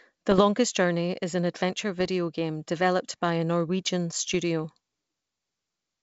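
Three bursts of bit errors on an ADPCM link break into the speech at 0.31 to 0.41 s, at 2.00 to 2.09 s between "is an adventure" and "game developed by a", and at 4.34 s. Each flipped bit also throws off the decoder's step size and predictor, so the damage rings on as pops and rough, level-jumping grit rather than the clean gaps of lost packets. The error rate is low, around a few tenths of a percent. The surrounding wideband sound fits G.722 at its full rate.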